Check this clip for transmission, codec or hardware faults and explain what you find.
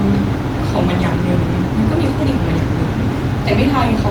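No transmission, codec or hardware faults detected here.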